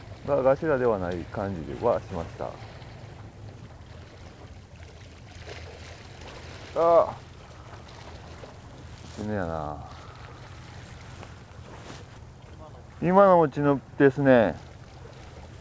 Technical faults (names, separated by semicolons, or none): none